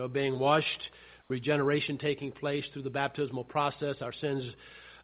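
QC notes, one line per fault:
1.22–1.30 s, comfort noise in place of the background: for 80 ms the real background, sitting about 36 dB below the loudest parts, gives way to a steady, featureless hiss about 2 dB quieter, then the original background returns. This is likely discontinuous transmission, with the receiver synthesising noise during a pause. A noise gate or dropout would leave silence instead. The noise stays band-limited below 4 kHz like the rest of the call audio, which fits a G.711 telephone codec.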